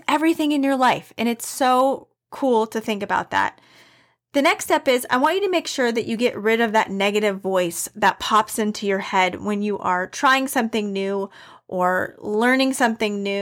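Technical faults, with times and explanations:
No technical faults can be heard in this speech recording; the signal holds steady and continuous across its whole span.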